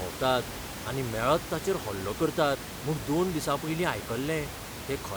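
No technical faults can be heard anywhere in this speech clip.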